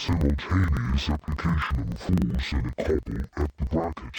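Throughout the clip, interleaved audio is being read as planar. Each block of alternating left and right samples is split in two, with the first half sent to the left channel and the second half to the right. Each half then plays at half speed alongside the other. With blocks about 42.67 ms long, which fits a 2048-sample block, the sound drops an octave, comes out doubled, and chops audibly at the block rate of about 23.4 Hz.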